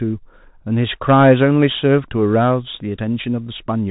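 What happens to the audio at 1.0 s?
At 1.0 s you're hearing the Bluetooth CVSD headset codec, and it isn't a local glitch: it runs through the whole clip. CVSD codes the speech one bit per sample as a simple up-or-down step, with a step size that keeps adapting, a rate that fits 64 kbps. Nothing above about 3.8 kHz survives, so the speech sounds boxed-in and dull. The coding damage is plainly audible, with scratchy s sounds, distorted loud high-frequency bits, and a grainy hiss underneath.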